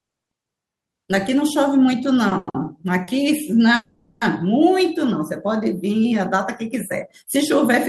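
At 2.29 s a short stall from a late packet holds the speech for about 20 ms, from 2.29 to 2.33 s. The packet missed its slot, the jitter buffer emptied, and the receiver stretched the last sound until the packet arrived, then carried on from the same point. It is heard as a brief smear or buzz with nothing lost. The clip then pauses again from 2.37 to 2.49 s for about 100 ms. This is a call audio freeze: the last sound continues as a fading buzz, and the speech picks up where it stopped. It then merges into another short stall from 2.49 to 2.56 s that adds about 50 ms. A further short stall at 3.04 to 3.09 s holds the sound for about 30 ms. The longest freeze runs from 3.75 to 4.23 s. About 460 ms is filled, and the held sound decays until the last 20 ms is silent. The speech then resumes intact, so timing is lost rather than content. This was likely caused by packets held up in transit. 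What separates the two faults is length and shape. A stall is a momentary stretch with a slight buzz or dip. A freeze is long enough to hear the fill fade toward silence before the speech resumes.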